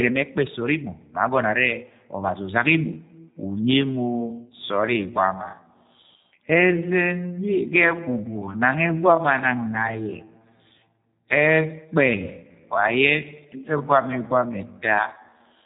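G.729 codec coding runs through the whole speech clip, and the sound is plainly damaged by it. Nothing passes above 3.8 kHz, and the speech has the rough, synthetic edge of audio rebuilt from a vocal tract filter, pitch predictor and a few pulses per frame, which fits a low-rate VoIP link around 8 kbit/s. A time-stretched section runs from 3.13 s to the end. The pace drops abruptly to about 0.66 times normal speed while the pitch holds steady, and the slowed speech drags, likely from software lengthening the audio by repeating short pieces.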